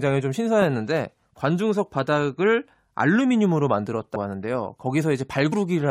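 Speech jumps forward at 4.15 s and again at 5.52 s, losing about 100 ms and 70 ms of audio. These are compressed frames skipped: a few whole 23.2 ms frames, missing or rejected by the decoder, vanish.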